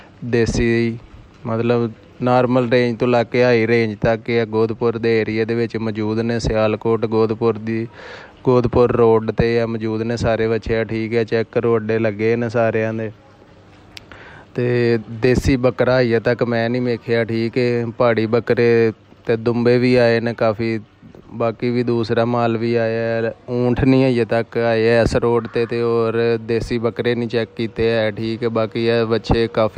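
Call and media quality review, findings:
No audible faults found.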